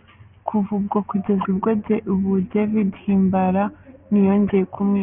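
Aliasing runs through the whole speech clip. The audio was resampled to what sounds like a 6 kHz rate without a low-pass filter first, so content above 3 kHz folds back as harsh, unrelated tones roughly 20 dB under the voice. Sibilants turn gritty and metallic. A spectrogram shows mirrored energy packed hard against 3 kHz.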